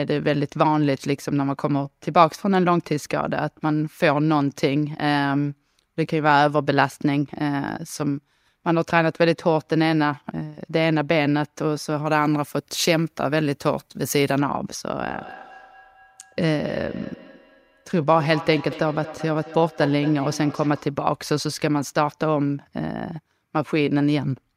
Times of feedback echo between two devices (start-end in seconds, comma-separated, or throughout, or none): 15.08-20.99